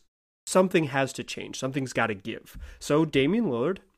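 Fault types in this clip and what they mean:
Clipped start after a pause, 0.42 to 0.47 s: after about 0.42 s of silence at the top of the clip, the output path has gone idle and needs a moment to wake and lock again, so roughly 50 ms of the first sound is swallowed. Speech then begins abruptly out of silence at "has to change", with its opening sound cut away rather than rising naturally from the quiet.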